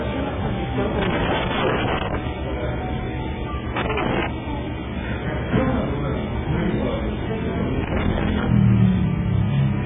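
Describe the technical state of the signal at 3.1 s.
At 3.1 s the sound has heavy AAC compression damage, running throughout and likely from a very low-bitrate AAC-LC encode, around 8 kbps. Nothing remains above 3.7 kHz, and starved quantisation leaves it dull and smeared with a warbling or fizzy texture that a clean low-pass filter wouldn't produce.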